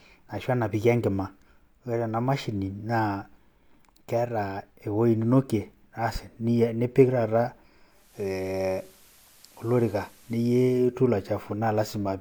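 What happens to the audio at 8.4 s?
Faint hiss creeps in from 7.87 to 10.98 s. It is digital radio blending to analogue: the receiver lost the digital stream and cross-faded over 340 ms to the station's FM signal, with the level unchanged.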